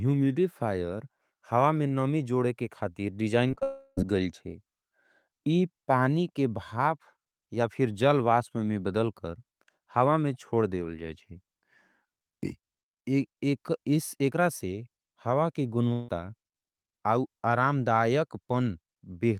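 This speech clip suffers repeated packet loss followed by network dropouts. From 3.47 to 3.63 s, just after "नमी जोड़े के खाथे", packets went missing in quick succession: several short holes, the longest about 22 ms, with roughly half of that 0.16 s span patched by stretching the preceding sound. The concealment keeps restarting, so the audio turns choppy and robotic, with fragments clipped out. Directly after that, from 3.63 to 3.99 s, the stream stops altogether, most likely a long network dropout. The receiver extends the last sound for about 0.34 s as a smeared buzz that decays, reaches near-silence for the final 20 ms, and then speech resumes with that portion simply gone. A second gap, again likely a long network dropout, follows "हावा के" from 15.93 to 16.10 s. There, about 0.16 s of continued tone bridges the hole with no silent tail before the speech returns, with the original audio from that stretch lost.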